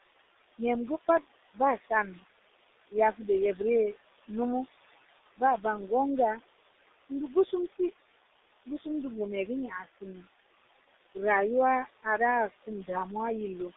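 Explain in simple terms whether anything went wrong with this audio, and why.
Yes, several things went wrong. The speech passed through the G.723.1 codec, an old low-quality phone format. It drops the high tones, so the voice sounds muffled, hoarse and smeared.

A noise suppressor was also at work, pushing the room's background noise down hard. That leaves noise suppressor artifacts: the leftover background pumps between words and can warble.

Four times the suppressor mistook speech for noise and turned it down too. This speech cut by the noise suppressor happens around 1.8 s, 7.5 s, 8.7 s and 9.7 to 10.0 s. Brief bits sound swallowed or faint.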